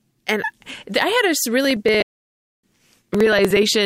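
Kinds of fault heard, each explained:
Periodic USB or driver dropouts: from 1.65 s to 3.75 s, tiny chunks of roughly 4 ms are skipped every 0.06 s, producing regular ticks across the speech.
Playback stall: the speech cuts out at 2.02 s for about 611 ms, likely the player starving for data.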